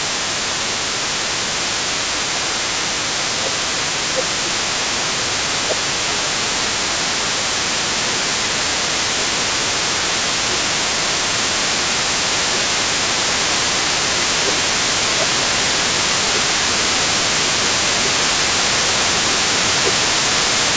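Speech recording in which a second voice, the other side's voice leaking through, sits underneath the talker from 0 to 20.8 s at roughly 10 dB below the main speech. This is likely residual loudspeaker echo that the device's echo canceller failed to remove from the microphone signal. There is also speech suppressed in double talk in three stretches: 0.51–1.94 s, with dips of around 15 dB; 3.34–13.02 s, again up to about 15 dB; and 14.19–20.07 s, up to about 10 dB. In each stretch the talker's level drops and recovers while both sides are active, most likely because the canceller could not separate near-end speech from echo and attenuated both. The audio extends no higher than 8 kHz, consistent with call microphone processing.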